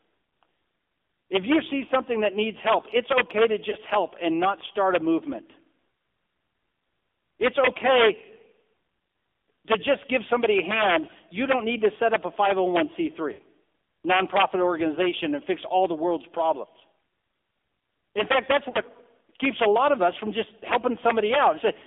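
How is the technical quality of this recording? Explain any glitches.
The speech has been through a narrowband mobile call and has three brief dropouts.

AMR narrowband mobile codec, throughout: the audio occupies only about 250 Hz to 3.6 kHz. AMR-NB rebuilds speech from a vocal-tract model excited by a few pulses per subframe, and at low bitrates that leaves a buzzy, synthetic edge. The degradation here is plainly audible, which fits a low mode around 7.4 kbps.

Lost AMR speech frames, at 3.70–3.76 s, 13.32–13.40 s and 18.70–18.78 s: when frames fail their checksum, the decoder repeats the last good pitch and filter settings at falling gain. The first, between "help it's okay to" and "help and not start", is a short dip that points to one frame. The second is longer and sounds like roughly three frames. The third, just after "fact that's", sounds like about two.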